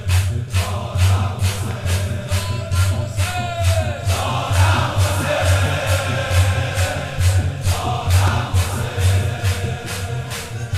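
Loud pops: a quick double at 1.71–1.93 s, then a much sharper single at 8.28–8.30 s, likely voltage spikes from a plug or switch.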